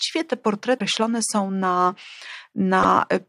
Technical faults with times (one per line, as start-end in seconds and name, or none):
0.76-0.81 damaged data in a compressed stream
2.80-2.85 damaged data in a compressed stream